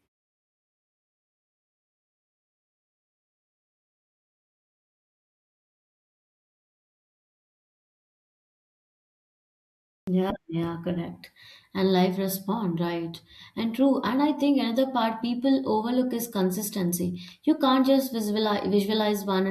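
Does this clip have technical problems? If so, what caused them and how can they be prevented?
Yes. A clipped start after a pause occurs at 10.03 to 10.07 s. After about 10 s of silence, the output device had gone to sleep, and its wake-up swallowed the first 44 ms of speech. Keeping the output stream active through silences, for example by feeding it a steady low-level or zero signal, prevents this.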